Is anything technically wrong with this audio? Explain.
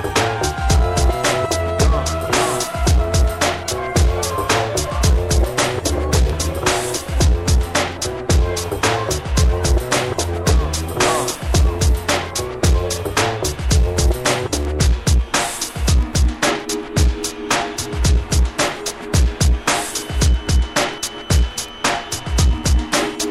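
Yes. From 19.81 s to the end at 23.31 s, a thin, steady feedback whistle at 3 kHz sits well below the sound, roughly 25 dB down, swelling and fading slowly in level. The likely cause is a loudspeaker-to-microphone loop hovering just at the edge of feedback, sustaining that one tone without building.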